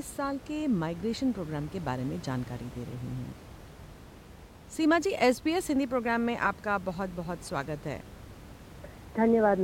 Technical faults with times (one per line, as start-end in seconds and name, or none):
none